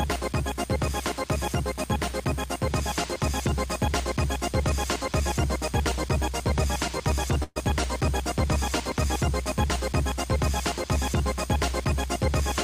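A burst of packet loss runs from about 7.43 s to 7.64 s. Roughly 120 ms of audio never arrived in time, so the receiver covered the hole by extending the last sound it had for about 123 ms and lowering its level as the gap went on, until it trailed into about 20 ms of silence. The result is a held, fading stretch, after which the sound picks up further along with that portion missing.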